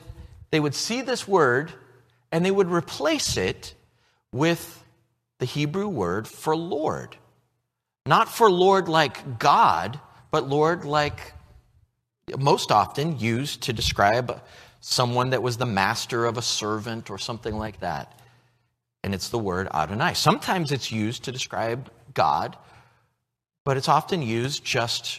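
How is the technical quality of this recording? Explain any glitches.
The speech carries a light coding texture, likely from low-delay AAC compression, and one audible glitch. At 19.33 s a brief smeared, slightly noisy blip, about 10 ms long, is AAC frame loss with concealment: a single frame went missing, and the decoder patched the gap by reusing and reshaping the preceding spectrum.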